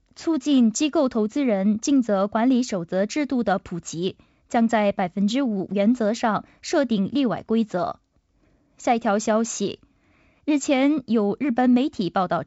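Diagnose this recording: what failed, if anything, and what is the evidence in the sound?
Nothing has failed: the speech passes through G.722 wideband telephone coding at what sounds like 56 kbit/s, with a light coding hiss and no content above about 7.7 kHz, exactly as that path should sound.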